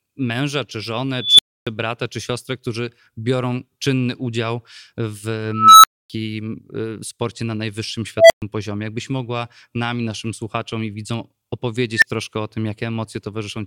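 A tone swells into a loud, clipping squeal and then cuts to silence at 1.17 s (around 4 kHz, 220 ms build, 280 ms gap), 5.49 s (around 1.5 kHz, 340 ms, 260 ms), 8.17 s (around 700 Hz, 130 ms, 120 ms) and 11.96 s (around 2 kHz, 65 ms, 20 ms). This is an unstable filter. A recursive filter with bad coefficients rings ever louder until its arithmetic overflows, and it stays silent until it resets.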